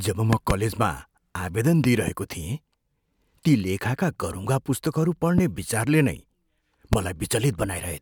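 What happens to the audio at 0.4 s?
A loud pop strikes between 0.33 and 0.53 s: two sharp thumps in quick succession, roughly 20 dB above the speech, which carries on beneath them. Unlike a dropout, nothing is lost. The likely cause is a sudden voltage pulse, from static or a switch, added onto the signal.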